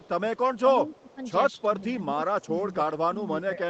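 From 0.0 to 1.25 s there is an echo leak. One side's echo canceller likely failed to remove all of its loudspeaker pickup, so a copy of the voice returns about 262 ms late and roughly 30 dB below the speech. It sounds like a faint, trailing repeat. The same 262 ms echo comes back from 1.59 to 1.93 s at about 35 dB down, and again briefly from 2.41 to 2.49 s at about 30 dB down.

Overlapping these stretches is speech suppressed in double talk. When both sides spoke at once, the canceller likely could not separate the talker from the echo and turned both down. The voice dips by about 10 dB from 0.0 to 0.18 s and by about 20 dB between 0.65 and 1.21 s. From 1.62 s to the end it sags intermittently by about 10 dB.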